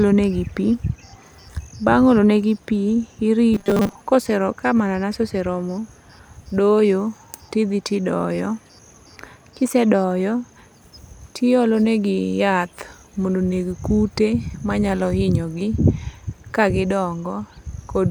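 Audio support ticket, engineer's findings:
Robotic sound from repeated short buffers, 3.54–3.96 s. Rigid metallic buzz at 200 Hz that still loosely tracks the speech. Likely cause: playback underrun, with the concealment looping a roughly 5 ms block over most of the span while the real audio is skipped. Spectrogram shows flat 200 Hz harmonic comb lines; waveform shows identical cycles repeating.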